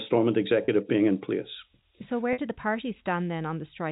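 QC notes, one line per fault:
0.65–0.68 s and 2.33–2.38 s: packet loss with pitch repetition. Gaps of 30 ms and 50 ms, which fit three and five 10 ms packets, are bridged by repeating the last pitch period. This gives a brief held, buzzy tone, and the longer gap fades toward silence before the audio cross-fades back.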